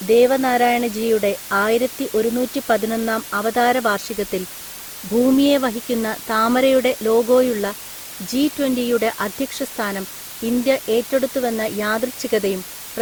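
From start to finish, low bit depth with dither gives a steady, even hiss about 15 dB below the speech. The requantisation fits roughly 5 bits, with dither turning the rounding error into white noise rather than distortion. Throughout, the speech also sounds swirly, smeared and hollow, with blurred attacks. The likely cause is generation loss from several repeated Opus encodes at around 64 kbit/s, each on a shifted frame grid.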